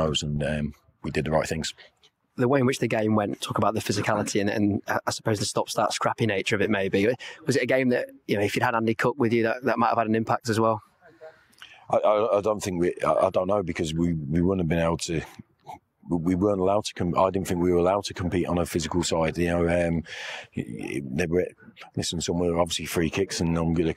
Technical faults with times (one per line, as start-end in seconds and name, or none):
none